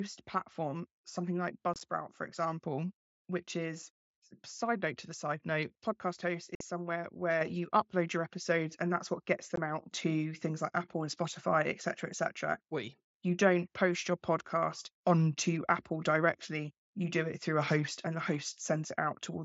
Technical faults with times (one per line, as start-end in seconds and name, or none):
1.74-1.81 unconcealed Bluetooth headset packet loss
6.55-6.61 unconcealed Bluetooth headset packet loss
7.41 microphone volume stepped up
9.56 unconcealed Bluetooth headset packet loss